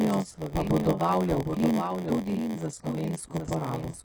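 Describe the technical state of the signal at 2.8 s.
At 2.8 s, as across the whole clip, a doubled audio track is present: a full-band copy of the speech trails the original by roughly 0.7 s, about 5 dB quieter. It is likely a second capture path or an edit holding two copies. Unlike an echo or reverb, the copy carries no decay or room colour.

Heavy HE-AAC compression is also audible, likely from a very low bitrate, around 12 kbps. The treble is rebuilt from copied lower bands rather than coded, so sibilants sound gritty, metallic or lispy. This separates it from plain low-pass coding, which would sound dull.

A padded block size mismatch runs through this moment as well. Each block is written short and filled with zeros, which fits 512-sample reads. The inserted gaps produce a steady buzz at 86.1 Hz and slow the audio to 0.938 times speed. This periodic buzz distinguishes it from random dropouts.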